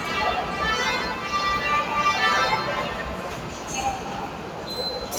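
A recording of everyday sounds, carrying two faults that run the whole way through. First, a noise suppressor applied to music or sounds: a speech-oriented suppressor treats the steady parts and ambience as noise and pulls them down, so onsets get through while sustained portions and decay tails sink by roughly 5 dB, giving a pumping, thinned texture. On a waveform the envelope dips shortly after each attack; a spectrogram shows tails and background bands fading in blotchy patches rather than decaying smoothly. Second, sample clock jitter: the converter's timing wanders by around a couple of microseconds, so each sample lands slightly early or late, and the error scales with how fast the waveform is changing. It adds a grainy hiss sitting some 35 dB below the signal, strongest on loud, bright moments and gone in the quiet gaps. A spectrogram shows a diffuse haze of broadband energy spreading upward around high-frequency content, tracking the signal's level rather than forming a steady noise floor.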